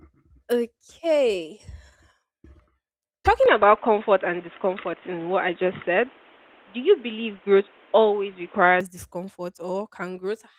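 It's a speech clip, and from 3.46 s to 8.81 s it suddenly goes dull and boxy, with nothing above 3.8 kHz, then opens back up. There's no gap at either switch and the loudness stays about the same, but a fresh layer of background noise sits well below the speech through that stretch. That's most likely the input switched to a poorer device, say a headset's call profile, mid-recording, underneath the light Opus voice compression.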